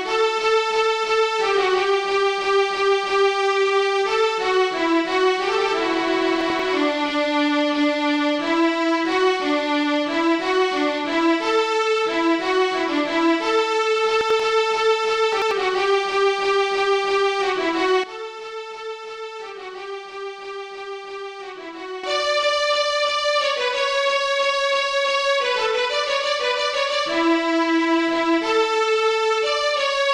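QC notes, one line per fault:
6.41–6.60 s, 14.21–14.40 s and 15.33–15.51 s: chunks out of order. Each time, one block of about 93 ms plays one slot late, after the block meant to follow it. Nothing is missing. The swapped order gives a brief jumbled stutter, with three hard joins.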